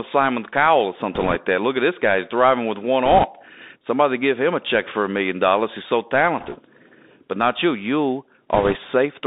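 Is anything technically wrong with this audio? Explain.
Yes. Two faults are audible in this speech.

The first, throughout, is the Bluetooth CVSD headset codec. The link codes each sample as a single up-or-down bit with an adapting step, which fits a 64 kbps CVSD stream, and the line passes only about 250 Hz to 3.7 kHz. The speech sounds thin and boxed-in. Sibilants turn scratchy, loud bright sounds smear where the step can't keep up, and a fine granular hiss runs beneath everything.

The second is bit errors on a Bluetooth voice link, in four bursts: 1.14 to 1.36 s, 3.05 to 3.24 s (just after "driving with one"), 6.39 to 6.56 s, and 8.54 to 8.76 s. Flipped bits push the decoder's tracking up or down wrongly, but each bit carries little weight and the error fades quickly. Each burst therefore adds a rushing, crackly noise rather than sharp clicks. It is somewhat lighter at 6.39 s, where fewer bits were corrupted.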